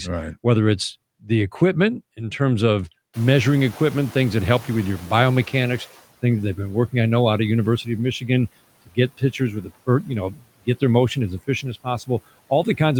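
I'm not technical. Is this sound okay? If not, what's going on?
No. Noise suppressor catching up, from 3.13 to 6.0 s: the background noise in the room jumps up around 3 s, and the filter that removes noise takes nearly three seconds to adjust. Until it does, the noise comes through louder, then fades down.

Speech cut by the noise suppressor, from 8.86 to 9.71 s and from 10.31 to 10.47 s: the noise filter mistakes bits of speech for background noise and turns them down. Brief moments sound swallowed or faint, especially soft sounds and the ends of words.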